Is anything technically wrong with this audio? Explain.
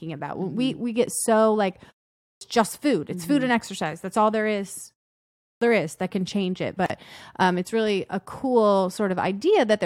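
Yes. There are two kinds of fault in this speech.

Clipped start after a pause, at 2.17 s and at 5.36 s. Each follows a short pause, of 0.33 s and then 0.5 s. The output device drops into a sleep state during the silence and needs time to wake again. About 240 ms of speech is lost at 2.17 s, and about 250 ms at 5.36 s. The speech then starts abruptly out of silence, without its opening sounds.

Gap at a join of encoded pieces, at 6.86 s to 6.90 s. The audio was encoded in separate pieces and joined without trimming. Each encoder run adds silent delay at its start and pads its last frame, and that padding remains. The result is a 37 ms hole in continuous speech. Its edges are smeared by the codec. The speech resumes from where it stopped.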